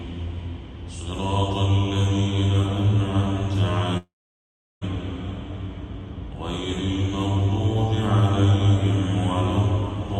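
At 3.97 s the audio breaks off in what is likely a long network dropout, lasting until 4.84 s. The last sound is stretched into a brief fading buzz, then about 0.72 s of near-silence follows before the audio resumes with roughly 0.84 s of material gone. Unlike a short packet-loss glitch, the concealment gives out and leaves a gap. Unlike a deliberate cut, the sound fades into that gap rather than stopping cleanly.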